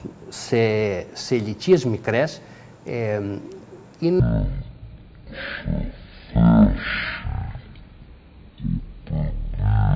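From 4.20 s to the end, the audio runs at one third speed and about 19 semitones low, a wrong sample rate consistent with 48 kHz material played at 16 kHz.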